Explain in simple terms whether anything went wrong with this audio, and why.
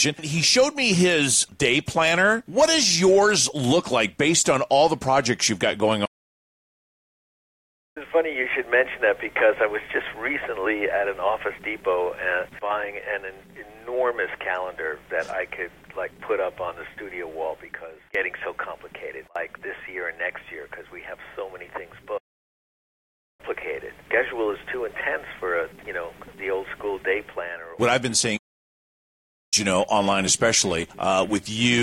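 Three times the sound stops dead and then carries on: from 6.05 to 7.97 s (about 1.9 seconds of silence), from 22.17 to 23.41 s, and from 28.37 to 29.54 s (each about 1.2 seconds). This is a playback stall, most likely the player running short of data or being held up, so nothing reached the speakers until it caught up. A dropout would be a tiny gap or click; these silences last over a second.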